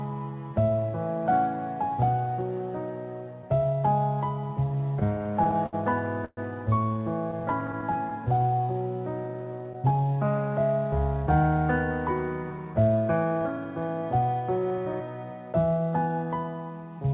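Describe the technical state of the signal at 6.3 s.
At 6.3 s the sound stalls: from 6.25 to 6.39 s the last moment is stretched into a fading buzz or hiss for roughly 120 ms, then about 30 ms of silence, before the audio resumes exactly where it stopped, with nothing lost and everything after arriving about 123 ms later. This call audio freeze was likely caused by packets held up in transit, letting the jitter buffer run dry, heard here within a band that ends at 4 kHz.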